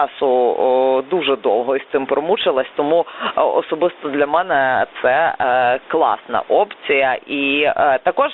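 Speech that runs through two faults from start to finish. The gain was likely set far too high for the microphone, so a fast limiter clamps down on each loud syllable. The result is gain pumping of around 10 dB: loud and soft parts end up closer in level, leaving the sound squashed. The audio also passed through a Bluetooth CVSD headset codec, consistent with a 64 kbps link. Its band stops near 300 Hz and 3.7 kHz, so the sound is thin and boxy, with scratchy s sounds, distorted loud highs and a granular hiss underneath.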